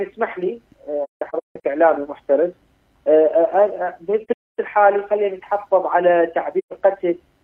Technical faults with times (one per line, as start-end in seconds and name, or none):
1.04-1.64 AAC frame loss with muting
4.24-4.59 AAC frame loss with muting
6.58-6.73 AAC frame loss with muting